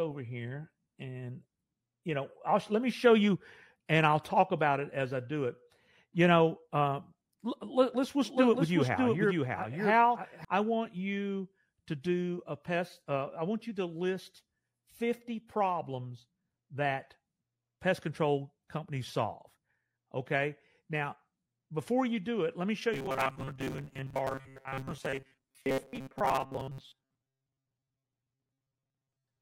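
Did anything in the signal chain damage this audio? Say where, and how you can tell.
Yes. From 8.25 to 10.45 s, right after "know um let us", there's a doubled audio track: a clean, dry copy trailing about 0.7 s behind at about 5 dB down, cutting off abruptly before "I want you to". That's likely a second, slower capture path being mixed in.

From 22.94 s to the end, after "it let me show", there's robotic sound from repeated short buffers: a rigid metallic buzz at 134 Hz, which fits chunks of about 7.5 ms being replayed. Most of the real audio is skipped, so the driver or buffer stage is starving.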